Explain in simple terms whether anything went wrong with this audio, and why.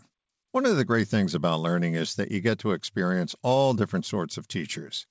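Nothing went wrong with this speech recording, and no faults can be heard anywhere in it. It travelled over an ordinary WebRTC call path with the G.722 codec, which does its job as designed and simply leaves out everything above 8 kHz, so the very highest, airiest part of the sound is missing.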